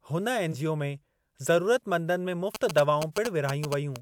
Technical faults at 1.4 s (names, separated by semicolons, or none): none